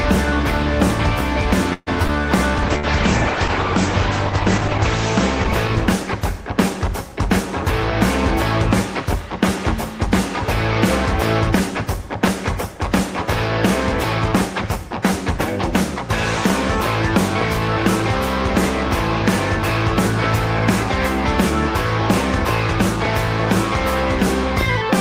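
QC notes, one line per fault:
1.73 to 2.10 s, repeated packet loss (robotic sound): choppy stretch with three holes, the longest about 133 ms, mostly patched by stretching the previous sound, with about 40 ms left missing.
2.63 to 7.46 s, call bitrate drop: sound turns rough and muffled as the encoder falls from 32 to 10 kbps, narrowing the band from 20 kHz to 8 kHz.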